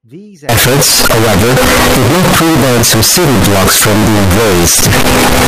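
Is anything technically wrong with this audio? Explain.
Yes. From 0.49 s to the end, the speech turns into very loud, harsh distortion, with quiet stretches as loud as the rest. This is likely signed and unsigned mixed up in 16-bit samples: the flipped top bit makes every zero crossing jump full-scale. Unlike ordinary clipping, silence itself becomes loud.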